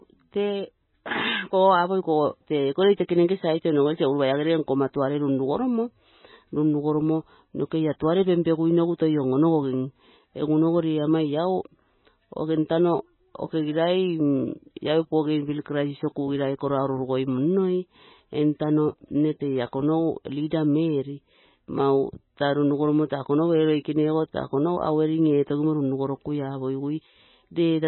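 From start to finish the speech sits behind a hard ceiling, with nothing above 4 kHz, and it has a watery, swirling texture where weak detail flickers in and out. That's likely MP3 compression, damaged heavily enough to point to a very low bitrate, around 16 kbps.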